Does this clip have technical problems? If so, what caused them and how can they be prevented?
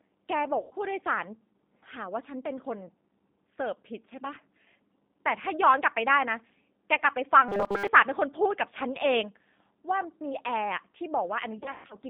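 Yes. The whole clip is confined to roughly 200 Hz to 3.7 kHz, and the speech sounds rough and slightly synthetic, which fits the G.729 codec at 8 kbit/s. Unlike plain low-pass filtering, the codec adds a grainy, artificial texture to the voice rather than just dulling it. Using a wideband codec such as G.722 or Opus avoids this when the network can carry it.

VoIP packet loss concealed by the speech codec appears at 0.61 to 0.74 s, with about 100 ms missing; at 6.98 to 7.02 s, with about 20 ms missing; and at 11.58 to 11.96 s, with about 200 ms missing in bursts spread over 320 ms, the longest lasting 120 ms. In each gap the decoder stretches the last sound into a buzzy tone or coloured noise that fades, and the voice stays weak for a moment after audio returns. That decay sets it apart from a rigid repeating buzz. Better network quality of service, or forward error correction, would reduce the losses.

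Robotic sound from repeated short buffers runs from 7.49 to 7.88 s, where the voice becomes a fixed, metallic buzz at 200 Hz that still roughly follows the speech. That pitch fits a 5 ms block being replayed over most of the stretch, likely because audio reached the playback buffer too seldom. Unlike concealment, this buzz does not fade. A larger jitter buffer, or steadier scheduling of the audio thread, would prevent it.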